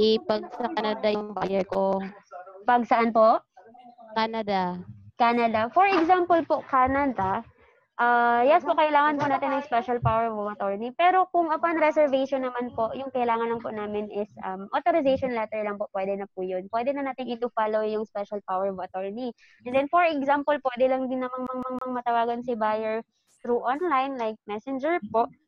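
Near the end, from 21.47 to 21.95 s, the audio gets stuck like a CD stuck on one turn: the same 160 ms slice plays three times over with a tiny mute at each jump, the quick even stutter you get when a scratch keeps bouncing the laser back a track.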